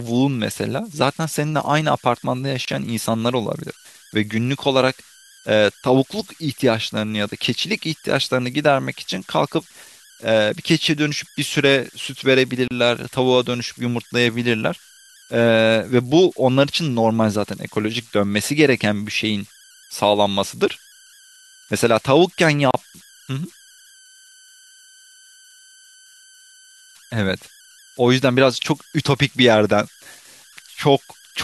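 A tone near 1.5 kHz sits under this speech recording throughout, with grainy noise about 28 dB below the signal. These are converter idle tones: an undithered delta-sigma converter settles into repeating bit patterns at low input levels, and those patterns produce audible tones. The speech also drops out briefly three times, about 10 s apart: a 25 ms gap at 2.65–2.68 s, then 32 ms gaps at 12.68–12.71 s and 22.71–22.74 s. Each silence has smeared edges, and the speech resumes exactly where it stopped. These are gaps at joins of encoded pieces, where separately encoded segments were spliced without trimming each encoder's start-up delay and final-frame padding.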